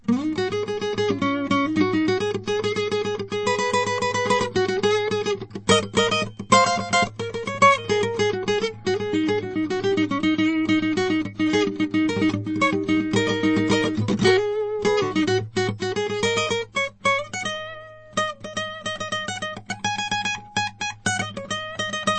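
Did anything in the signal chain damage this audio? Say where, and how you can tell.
Yes. From start to finish the music sounds watery and swirly, with a plainly audible smeared, chirpy texture on bright sounds, and nothing at all above 8.4 kHz. This points to the codec stage, most likely MP3 compression at a starved bitrate, which fits roughly 36 kbps. Short of bits, the encoder has cut the treble at a fixed frequency and zeroed quieter spectral lines. Those lines then switch on and off between frames, producing the swirl and blurring attacks.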